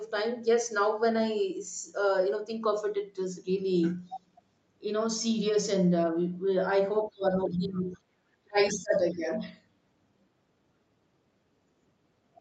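Speech suppressed in double talk hits this speech recording from 7.11 to 7.98 s and again from 8.42 to 9.42 s. In each stretch the talker's level sinks, at worst by about 20 dB in the first and about 30 dB in the second, for roughly three-quarters of a second. This is likely an echo canceller that heard both parties at once, could not tell the local voice from the loudspeaker echo, and pulled everything down together. Other side's voice leaking through appears inside the first dip, as two brief scraps from 7.52 to 7.56 s and from 7.74 to 7.79 s. They are faint, about 35 dB and about 25 dB below the talker. These fit residual loudspeaker sound that the canceller failed to strip from the microphone signal, pointing to the same struggle during overlapping talk. The call path's 8 kHz top end can be heard throughout.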